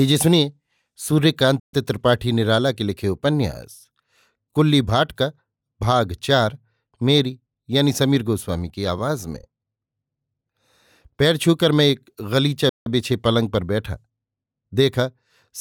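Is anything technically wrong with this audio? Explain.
Yes, there are two playback stalls in this speech. At 1.60 to 1.73 s the sound cuts off mid-flow into silence for about 0.13 s, and at 12.69 to 12.86 s it does so again for about 0.17 s. The likely cause is the player running short of data or having its thread blocked, so output stops until it catches up. Unlike a natural pause, the silence lands abruptly in the middle of ongoing sound rather than at a phrase boundary.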